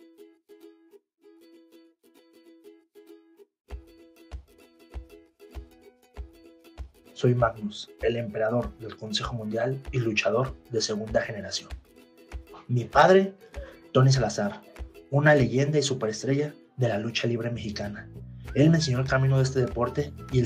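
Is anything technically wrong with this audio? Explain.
Yes. From 12.99 to 13.16 s there is hard clipping: the signal overdrives a stage by about 3 dB, so its peaks are sliced flat, adding high harmonics. It sounds like a brief crackly edge, harsher and more abrupt than the rounded warmth of soft saturation.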